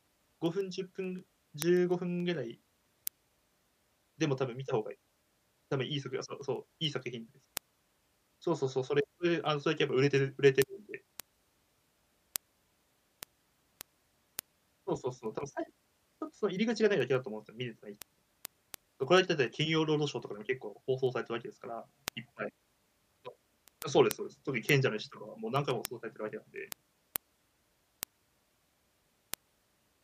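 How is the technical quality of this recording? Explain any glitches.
The recording is marred by a steady stream of word clock ticks running from 0.17 s to 29.92 s. The receiving device's clock isn't locked to the sender's and drifts by something like 150 ppm, slipping a sample roughly every 0.15 s. The result is some two hundred sharp, unevenly loud ticks at a regular pace over the speech.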